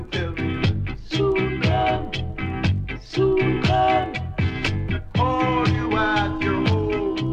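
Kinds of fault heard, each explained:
No technical faults can be heard in this audio.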